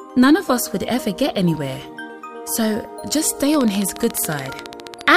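From 3.54 to 5.15 s, a regular train of clicks ticks over the sound at 14.4 per second, around twenty sharp pulses, likely from equipment interference.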